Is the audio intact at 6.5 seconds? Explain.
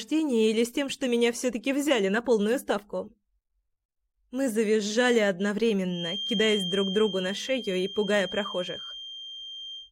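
No. At 6.5 seconds a feedback whistle is present. It begins at 5.85 s and continues to the end. It is heard as a thin, steady 3.2 kHz tone sitting roughly 10 dB below the main sound and swelling and fading slowly in level. The likely cause is a loudspeaker-to-microphone loop held just at the edge of feedback, so that one frequency rings on without building up. A spectrogram shows this as a narrow horizontal line at 3.2 kHz. The waveform shows only a faint, fine-grained thickening.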